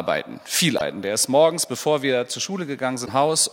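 Damaged data in a compressed stream, from 0.75 to 0.81 s and 3.02 to 3.09 s: corrupted frames lose decoder sync, and each gap is heard as a short glitch.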